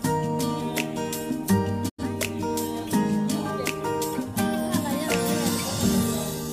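A digital broadcast dropout hits this audio at 1.88 s. The receiver lost valid frames, fading out over about 20 ms and muting roughly 85 ms of programme, which fits two lost frames, before sound resumes at 2.03 s. On a waveform or spectrogram it appears as a short tapered gap, blank across all frequencies.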